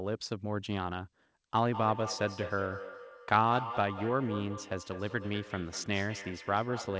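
From 1.54 s to the end you get a feedback echo between two devices. Two devices on the same call are sitting in one room, so one plays out what the other's mic sent, that mic hears it again, and neither echo canceller catches it, since each only removes its own playback. The speech keeps coming back roughly every fifth of a second, thinner and ringier each pass, peaking at about 10 dB below the talker. It's all heard through the call's bandlimited path, with nothing above 8 kHz.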